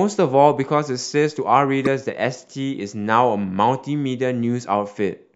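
At 1.85 s the decoder plays out a corrupt frame, in fact a couple of frames' worth, whose bits were flipped. With gain values and spectral codes misread, energy lands at frequencies the speech never had, so instead of a clean continuation there is a brief, harsh blip of spurious sound lasting only as long as those damaged frames, and loud, peaking around -5 dBFS.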